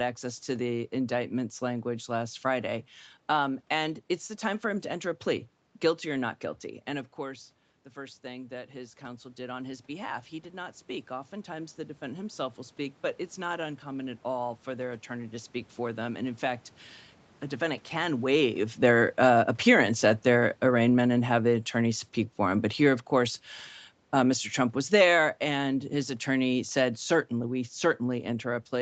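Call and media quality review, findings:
Automatic gain rising, 7.18–13.06 s. Talker moved back near 6.5 s and the input dropped about 14 dB; the AGC ramps gain up about 9 dB over nearly 6 s. Voice and room noise swell together; level only partly recovers.

Automatic gain falling, 18.25–22.08 s. Talker moved near 18.0 s; the AGC pulls gain down about 6 dB over roughly 4 s. Sound starts loud, then sinks, with the background sinking alongside.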